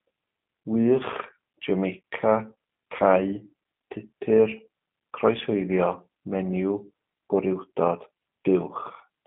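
From start to finish the speech carries G.729 codec damage. The band is narrow, roughly 150 Hz to 3.5 kHz, so it sounds thin and boxy. Each short frame is rebuilt from a filter and a few pulses, fitting an 8 kbit/s link. The result is plainly rough and synthetic.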